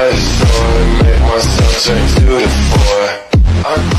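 No technical faults can be heard in this audio.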